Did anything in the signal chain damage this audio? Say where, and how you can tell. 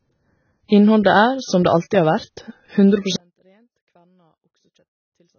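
Yes. Throughout, nothing sits above 6.5 kHz and the speech sounds dull and warbly. The likely cause is heavy AAC compression at the codec stage, fitting roughly 18 kbps.

From 3.16 s to the end, the level drops about 37 dB and the speech nearly vanishes. That points to one channel inverted, likely in the wiring, cancelling on the mono sum.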